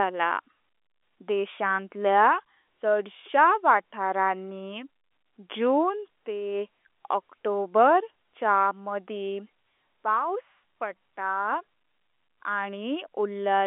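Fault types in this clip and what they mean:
There are no fault types in this clip, only the speech as carried over an ordinary telephone line.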